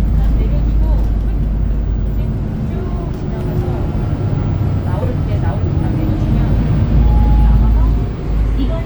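No technical faults are audible anywhere in this sound.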